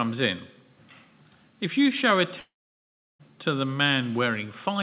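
A long network dropout runs from 2.4 to 3.21 s: the sound smears into a fading buzz, then about 0.7 s of silence, resuming with content missing, likely from lost packets. The audio, carried over a call path with nothing above 4 kHz, consistent with G.711 A-law at 64 kbps, is otherwise band-limited as expected.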